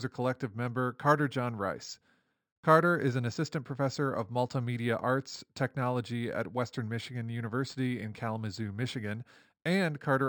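Speech runs the whole clip with imaging from linear upsampling. The sound points to a 12 kHz recording raised to 48 kHz by straight-line interpolation, a weak filter that dulls the top of the original band and leaves a mirrored copy of the spectrum from 6 kHz to 12 kHz, roughly 30 dB down, heard as faint metallic shimmer on sibilants. Plain band-limiting would leave silence above 6 kHz, and aliasing would fold energy below 6 kHz instead.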